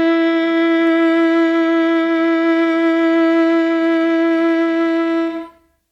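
Listening through this music clip, nothing technical stood out.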